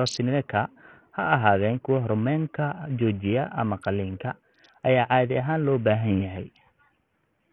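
Bluetooth SBC compression runs through the whole of this speech recording. The treble comes and goes in flickers, and a gritty, grainy noise with aliasing clings to the sound. The likely cause is an SBC link squeezed into a small bit pool. The weaker high sub-bands get almost no bits and the rest are coarsely quantised. That heavy damage fits a bitrate of around 48 kbps.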